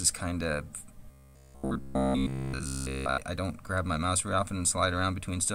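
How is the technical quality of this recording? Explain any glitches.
The recording has one clear glitch. From 1.11 to 3.21 s the audio turns into robotic sound from repeated short buffers: a rigid, metallic buzz near 66.7 Hz. That fits a 15 ms chunk being looped throughout while fresh audio is skipped, likely from late-arriving data.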